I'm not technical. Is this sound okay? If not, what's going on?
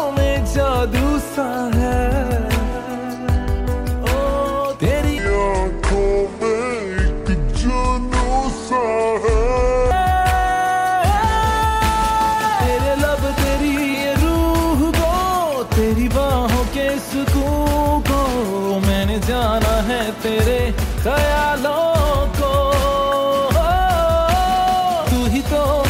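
No. From 5.18 to 9.91 s the sound turns slow and deep, about seven semitones lower: a section at the wrong speed, likely played at 0.678 times normal speed.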